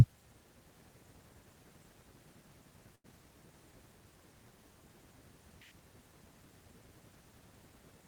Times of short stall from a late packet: 2.95-3.06

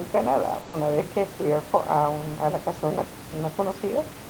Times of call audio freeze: none

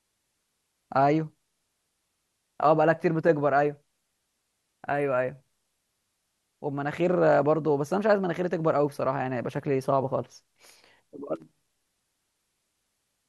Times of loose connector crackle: 11.36-11.99

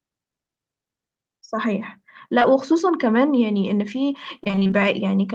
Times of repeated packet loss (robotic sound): 4.44-4.81

